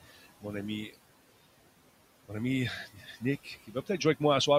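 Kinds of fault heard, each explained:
Noise suppressor artifacts: the noise suppressor pulls down the bands it judges to be steady noise, by about 17 dB, frame by frame. The room noise sinks in the gaps and rises back under the speech.
Speech cut by the noise suppressor: the suppressor mistook parts of the speech for noise and turned them down with the background. At 2.86 to 3.22 s and 3.67 to 4.01 s, brief stretches drop by up to about 15 dB, leaving sounds swallowed and faint.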